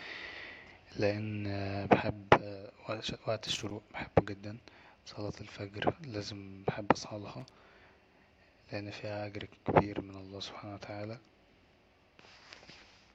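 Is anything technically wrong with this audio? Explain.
Yes, there is loose connector crackle in this speech, at 3.49 to 3.71 s and at 7.40 to 7.51 s, just after "صلاة الفجر لا بحب". A worn contact rapidly breaks and remakes the signal, chopping it into irregular scratchy bursts. Unlike steady surface noise, the crackle comes only in these short bursts.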